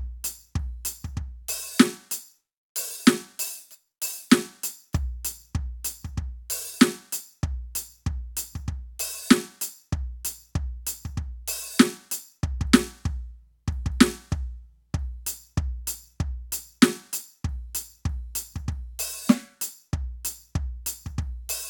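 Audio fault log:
Nothing stood out on listening to this music.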